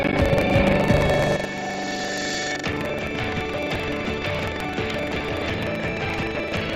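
Buffer tearing runs through the whole clip as a steady robotic rattle at about 23.4 Hz, heard only while sound is present. The rate fits a 2048-sample buffer: the writing program and the hardware reader have slipped so they cross inside every period, leaving roughly a fifth of each buffer filled with audio from around 150 ms earlier, with hard joins at both edges. An input switched to a poorer device is the likely cause of the change at 1.35 s, which lasts to the end. From there the sound turns duller, with a narrower band. The level drops by about 10 dB, and a new background noise sits around 40 dB below the signal. No silent gap marks the switch, so the tone and level change abruptly from one moment to the next.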